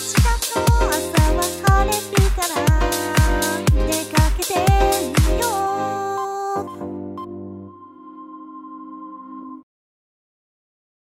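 Listening through, nothing in the recording stood out as a technical problem.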